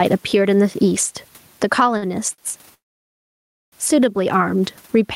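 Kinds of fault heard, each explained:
Gain pumping: the level is constantly pulled down on loud speech and let back up in pauses, likely from a fast limiter, swinging by about 10 dB; waveform envelope looks flattened.
Short stall from a late packet: at 1.97 s and 2.34 s the last sound is held for 48 ms and 39 ms, then resumes; spectrogram shows brief smeared, steady bands.
Call audio freeze: from 2.74 s to 3.74 s the speech stops for about one second, likely packets held up, nearly all of it silent; waveform shows a flat gap, nothing lost.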